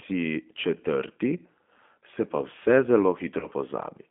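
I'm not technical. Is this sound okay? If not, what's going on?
No. The whole clip has passed through the G.729 codec, a phone-call compression scheme that doesn't store the actual sound. Instead it keeps a rough model of the throat's shape and the pitch, plus a few pulses for every short slice, and the listener's end rebuilds the speech from that. The line also keeps only roughly 200 Hz to 3.4 kHz. The result is clearly audible: thin, phone-like speech with a slightly rough, artificial edge.

Separately, from about 3.40 to 3.47 s there is VoIP packet loss concealed by the speech codec. A small piece of the call, about 20 ms and consistent with a single lost packet, never arrived. The decoder filled the hole by guessing forward from the last pitch and throat shape it had, turning quieter as it went. You hear a brief buzzy or smeared patch there, and the speech stays weak or distorted just afterwards while it recovers.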